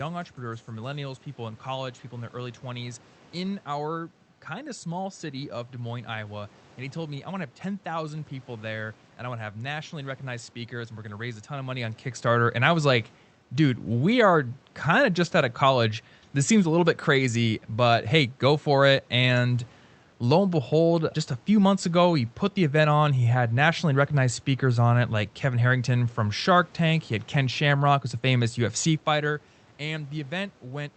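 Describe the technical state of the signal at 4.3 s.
At 4.3 s the signal is intact, with no technical fault.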